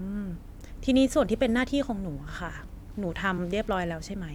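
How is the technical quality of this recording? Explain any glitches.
The recording has one glitch, at 3.37 s in the speech, where compressed frames were skipped. Around three whole frames of the encoded stream never reached the output, either missing from the file or rejected by the decoder as damaged. The frame length heard fits about 23.2 ms, so roughly 70 ms of audio drops out and the speech jumps forward.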